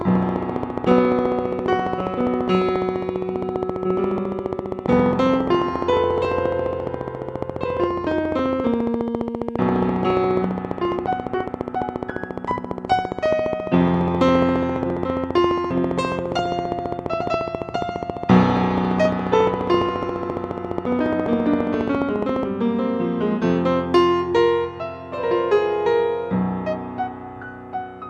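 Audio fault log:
0.01–22.44 s, train of clicks: a regular ticking of around 300 near-identical pulses at 14.6 per second, peaking roughly 15 dB above the sound and audible through pauses too. Its fixed pace and shape point to a likely source in nearby electrical interference.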